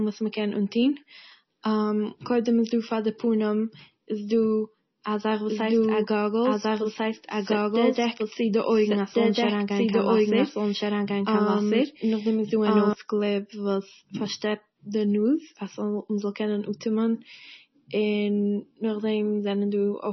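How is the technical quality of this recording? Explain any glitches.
The recording has two clear technical problems: heavy lossy compression across the whole clip, and a second copy of the audio running for several seconds in the middle.

The speech was likely squeezed through MP3 compression at a very low bitrate, probably around 24 kbps. Short of bits, the encoder discarded everything above 5.9 kHz and dropped weak frequency lines frame by frame, so the sound is dull, watery and swirly, with smeared consonants.

From 5.49 s, right after "א זאך", until 12.93 s, a doubled audio track plays. A second full-band copy trails the original by about one and a half seconds at roughly equal loudness, with no echo tail. It starts and stops abruptly.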